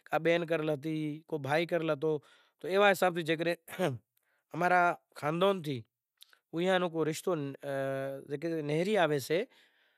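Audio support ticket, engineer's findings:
No audible faults found anywhere in the speech signal; capture and playback path checks out with nothing to report.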